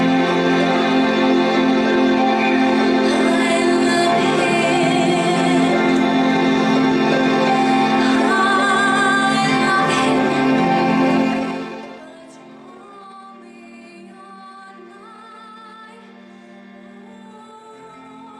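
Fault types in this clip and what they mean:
zipper noise: A gain reduction was applied in unsmoothed steps of about 2 dB, around fifteen a second, lowering the level by roughly 25 dB between 11.19 and 12.13 s. Each step clicks, so a fast ticking zip rides on the fading sound.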